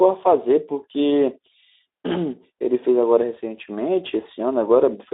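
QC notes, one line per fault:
Throughout: Speex codec. The speech is hoarse and grainy. Its excitation is coded too coarsely, which fits a rate near 11 kbps. The band is also confined to about 300 Hz to 3.7 kHz, so the sound is thin and lacks air.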